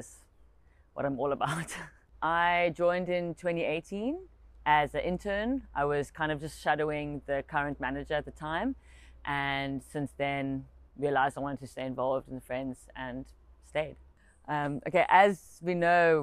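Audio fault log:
No faults were heard anywhere in the clip. There is nothing in it to log against any time or range.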